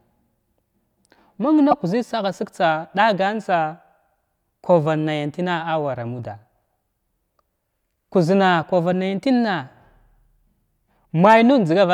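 At 1.71 to 1.73 s, just before "kuzzən sagha sig", damaged data in the compressed stream makes the decoder misread corrupted frames and lose sync, giving a brief glitch in the speech. A spectrogram shows a narrow disturbance; the waveform shows a short discontinuity.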